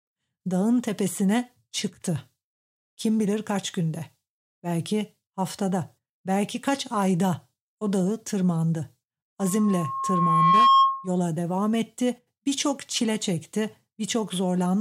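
From 9.39 to 11.11 s a loudspeaker feedback squeal takes over the speech: a lone 1.1 kHz tone swells over roughly a second and a half to sit around 10 dB above the voice. That gradual self-building growth marks a microphone-speaker loop, not a steady interfering whistle.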